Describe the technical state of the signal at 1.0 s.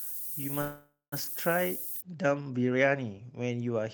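At 1.0 s the speech carries low bit depth with noise shaping, active from 0.00 to 2.01 s: a 6-bit signal whose rounding noise, nearly as loud as the speech, is pushed upward, giving a thin hiss that brightens toward the top, seen as dense energy rising into the highest spectrogram band. The same moment falls inside a call audio freeze from 0.61 to 1.14 s, likely from delayed packets draining the jitter buffer. The last sound stretches into a fading buzz or hiss, with about 180 ms of silence, then resumes with nothing lost but about 0.5 s later, appearing as smeared, flat spectral bands and a decaying, then flat, waveform.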